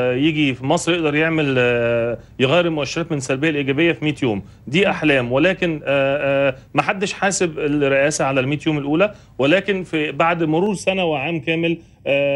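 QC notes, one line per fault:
10.66 to 12.36 s, channel delay (comb filtering): one channel arrives just under half a millisecond late, so summing to mono cancels shared content at evenly spaced frequencies. The first notch falls around 1.5 kHz, which makes the ending sound hollow and phasey.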